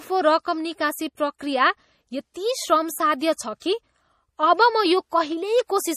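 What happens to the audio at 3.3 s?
A short hiss creeps in ahead of an attack from 3.34 to 3.38 s, softening it. This is pre-echo: quantisation noise smeared across the 43 ms before the transient. Underneath, the sound is watery and swirly with nothing above 15.2 kHz, likely MP3 compression at a low bitrate, consistent with about 40 kbps.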